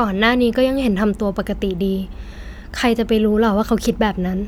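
Listening through the speech, nothing stood out as a technical fault at any point.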